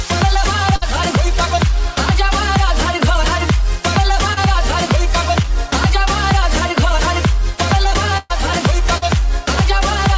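A burst of packet loss at 0.76 to 0.83 s drops about 60 ms of audio. The receiver extends the last sound for roughly 55 ms, fading it into a held buzz or hiss, then resumes later with that stretch gone. Short concealed packet loss follows at 4.33 to 4.51 s and 5.42 to 5.46 s. A few hundredths of a second arrive too late, and the decoder patches each hole from the preceding sound, leaving a brief smear or wobble as it blends back. A second burst of packet loss at 8.18 to 8.32 s loses about 120 ms, covered by a longer decaying continuation with no silence. Another short concealed loss at 8.98 to 9.04 s bridges about 40 ms the same way. Throughout, nothing sounds above 8 kHz, which fits a wideband call codec.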